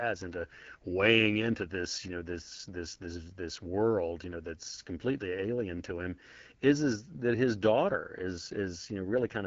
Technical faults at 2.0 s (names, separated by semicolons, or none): AMR wideband (HD Voice) codec